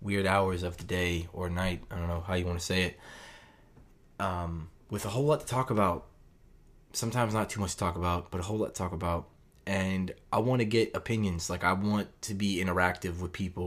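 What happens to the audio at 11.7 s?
At 11.7 s the speech continues intact, with no dropout, click, distortion or other fault audible at that point.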